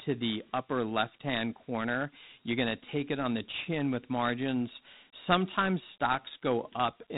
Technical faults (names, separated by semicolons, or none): Dialogic VOX ADPCM